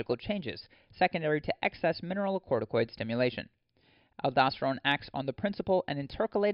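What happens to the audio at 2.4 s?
Nothing goes wrong at 2.4 s; the speech there is intact, with no dropout, click, distortion or other fault.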